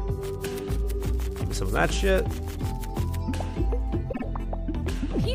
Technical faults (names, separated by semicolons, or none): repeated frames